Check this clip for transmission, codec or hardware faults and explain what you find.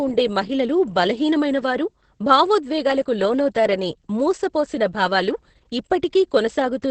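One codec fault runs through the whole clip: Opus voice compression, heavily applied. Its SILK coder quantises excitation coarsely at what sounds like about 10 kbps, leaving speech muffled, hoarse and robotic, with nothing above 8.6 kHz. The roughness sets it apart from a plain low-pass filter.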